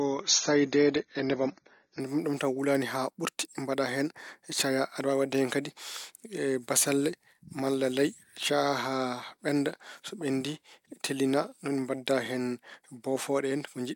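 From 0.0 to 2.0 s the speech plays as an adaptive stream starting at a low bitrate: the treble is missing, with nothing above 6.9 kHz, and codec artefacts are stronger, which fits an AAC stream of around 24 kbit/s. At 2.0 s the player steps up to a better version, consistent with about 96 kbit/s, and clarity returns at once with no gap. On a spectrogram, a flat ceiling at 6.9 kHz lifts abruptly at 2.0 s, while the waveform runs continuously across the switch.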